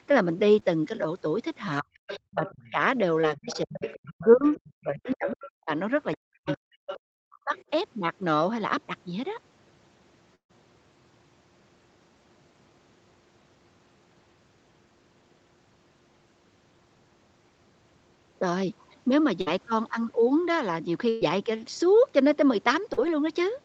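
At 0.59 s and again at 3.21 s there is short concealed packet loss: about 20 ms of the speech never arrived, and the receiver stretched the preceding sound over the hole before rejoining the real signal. Each one is a brief smear or wobble rather than a gap. The audio does not fade or go quiet, which separates it from the longer bursts later in the clip.

From 1.82 to 2.77 s, and over a longer stretch from 3.41 to 7.54 s, the talker's speech sinks in pieces, at its deepest by about 40 dB. That is speech suppressed in double talk, most likely the echo canceller ducking everything while both ends spoke. It is about 0.4 s of dips in the first stretch and roughly 2 s in the second. It is a choppy loss of level on the talker's own voice, not a lost stretch being patched.

Overlapping those windows, a second voice comes through from 1.94 to 2.71 s and from 3.37 to 5.52 s, at about 15 dB below the talker. 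It is louder, about 10 dB down, from 6.14 to 6.96 s, and a faint scrap about 30 dB down appears at 7.56 to 7.64 s. This is the other side's voice leaking through, likely left over from the talker's loudspeaker. It adds sound the talker did not make, whereas suppression takes the talker's sound away.

The burst of packet loss at 10.35 to 10.51 s removes about 140 ms. The filled sound decays, and the last 100 ms or so of it is silence, before speech resumes further along. The bursts at 19.41 to 19.48 s (about 60 ms) and 21.09 to 21.23 s (about 120 ms, held without dropping to silence) become a sustained buzz or fading hiss. They skip content, unlike the brief smears.

At 22.93 s a slightly longer short concealed loss of about 40 ms gives a brief wobble. The whole clip is band-limited at 8 kHz by the Opus call path.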